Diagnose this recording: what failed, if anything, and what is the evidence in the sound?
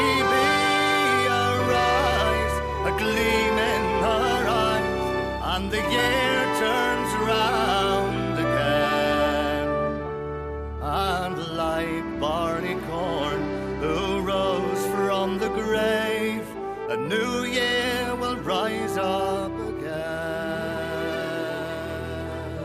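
Nothing stood out on listening that would point to a failure anywhere in the chain.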